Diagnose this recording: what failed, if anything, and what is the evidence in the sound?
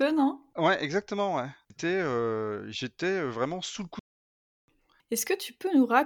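Playback stall: the speech cuts to dead silence from 3.99 to 4.68 s, a blank gap on waveform and spectrogram, likely the player starving for data.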